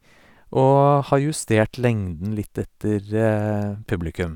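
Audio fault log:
No technical faults can be heard anywhere in the speech signal.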